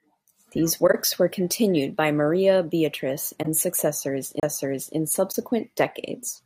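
At 0.87 s, damaged bits in the compressed stream were caught by the decoder, which covered the spoiled data itself instead of playing it. The result is a corrupt frame concealed: a soft-edged dip in the speech lasting until 0.95 s, just before "were continued by", with a length that points to about three frames. A second concealed corrupt frame follows at 3.42 to 3.47 s, a shorter smear that fits about two frames. In both cases the timing carries on without a jump.

At 4.40 s the playback head lost its track and landed on a different turn of the disc's spiral. This is a CD skip: the player mutes for about 30 ms, ending at 4.43 s, leaving a short gap. The speech then resumes from a different point in the recording, so the flow is broken by a sudden displacement rather than a simple gap.

At 5.32 s a frame whose bits had been flipped went undetected and was decoded as if it were valid, so misread values put energy at the wrong frequencies. 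This corrupt frame decoded is heard as a short glitch lasting until 5.35 s, a length that fits a single damaged frame.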